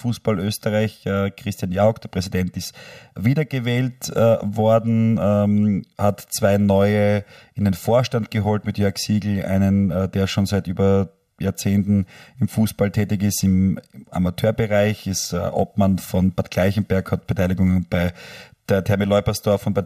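From start to finish the speech carries channel delay (comb filtering). One channel arrives roughly one and a half milliseconds behind the other, and when the two are summed to mono the shared content cancels at evenly spaced frequencies, the first notch falling somewhere around 300 Hz with further notches repeating up the spectrum. The result is a hollow, phasey tone that stays fixed throughout.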